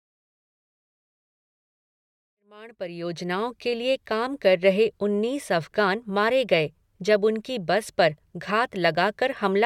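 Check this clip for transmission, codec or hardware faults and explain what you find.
No transmission, codec or hardware faults can be heard in this speech. The level rises in a smooth fade-in, like an editor's, from around two and a half seconds to 3.77 s, with no click or hard edge.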